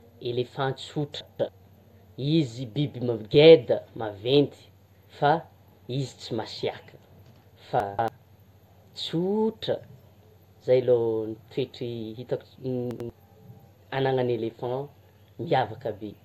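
A speech clip with chunks out of order at three points: 1.21 to 1.49 s, 7.80 to 8.08 s and 12.91 to 13.10 s. Each time a block of about 93 ms plays late. It lands two blocks late in the first two events and one block late in the last. Nothing goes missing. The sound jumbles briefly.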